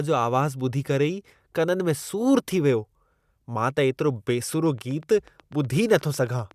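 From 4.53 to 6.52 s, a train of clicks ticks over the speech. About fifteen even pulses, 8.1 per second, match its loudness. Likely interference.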